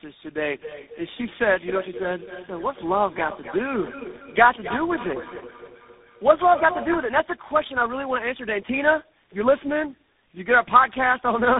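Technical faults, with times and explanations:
Throughout: tandem speech coding. The speech sounds rough, muffled and warbly, with nothing above about 3.8 kHz. The call was decoded and coded again each time it crossed to a link with a different codec. Each coder then worked on the previous coder's damaged output, so the errors piled up. The sound suggests four speech coders in a row, fitting a chain that moves through G.729A and GSM full rate and ends in CVSD.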